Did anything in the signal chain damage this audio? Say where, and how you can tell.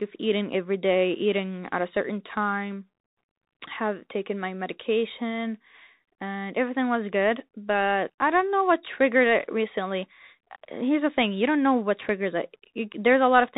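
Yes. The damage comes from the codec stage: the speech passed through a Bluetooth CVSD headset codec, and the effect is plainly audible across the whole clip. CVSD sends one bit per sample to tell the decoder to step up or down, with an adapting step size, which fits a 64 kbit/s headset link. Nothing above 4 kHz survives, s sounds turn scratchy, loud high-frequency moments outrun the step and distort, and a granular hiss sits under the speech.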